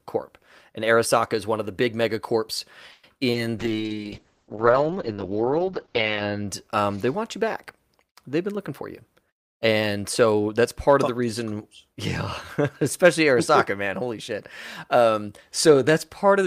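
Just after "of the big megacorps", from 2.91 to 3.05 s, the sound stretches into a fading buzz for about 120 ms and then resumes where it left off. This is a call audio freeze, likely from delayed packets draining the jitter buffer, which adds 120 ms of delay without losing content.

Right after that, at 3.32 to 3.36 s, there is short concealed packet loss. About 20 ms of audio never arrived, and the receiver papered over the hole by extending the preceding sound before blending back. It comes across as a quick smear.

From 3.59 to 6.54 s, leading into "um they want you", a call bitrate drop takes the encoder from 48 kbps down to 7 kbps. The bandwidth falls from 20 kHz to 8 kHz. For about 2.6 s at the lowest rate, the sound is muffled and coarse.

Two jitter buffer speed-ups follow, at 8.38 to 8.82 s (107 %) and 9.30 to 10.40 s (108 %). The receiver trims pitch-period slices to shed excess buffered delay, a few hundredths of a second in the first and about a tenth of a second in the second. 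The sound is audibly hurried at unchanged pitch.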